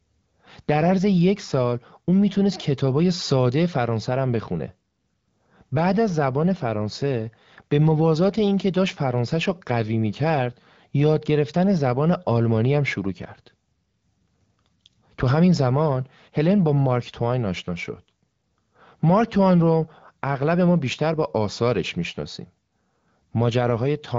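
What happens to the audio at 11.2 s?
Nothing goes wrong at 11.2 s: the speech carries through intact, with only the light coding character of AMR wideband (HD Voice) at 12.65 kbit/s.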